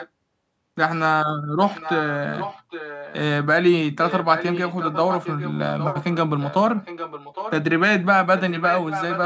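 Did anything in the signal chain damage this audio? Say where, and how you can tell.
Yes, there is an echo leak from call processing. A faint repeat trails the speech by 810 ms, about 10 to 15 dB down. It starts at 0.0, 1.74, 2.32, 4.06, 5.78, 6.76 and 8.37 s. The likely cause is a loudspeaker-side echo canceller letting pickup through.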